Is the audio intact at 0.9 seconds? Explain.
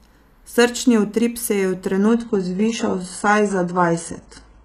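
Yes, the speech at 0.9 s plays through cleanly, with no dropout, click, distortion or other fault at that point.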